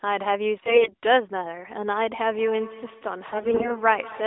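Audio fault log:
0.60–0.93 s and 3.26–3.82 s, AMR bit errors: the speech turns hoarse, scratchy and gargly while keeping roughly its pitch and loudness. Flipped low-priority bits in the mobile frames misplace the excitation pulses and skew the fine pitch, gain and spectral values, a level of corruption that points to a weak radio link.
2.33 s to the end, feedback echo between two devices: the speech returns as a thin, ringing repeat roughly every 200 ms, peaking at about 18 dB below the direct sound. A second device in the same room replays this microphone's audio, which is picked up again, and neither device's echo canceller removes the other's playback.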